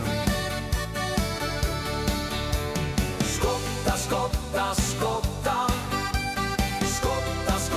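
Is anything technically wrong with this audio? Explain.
No, nothing technically wrong can be heard anywhere in this audio.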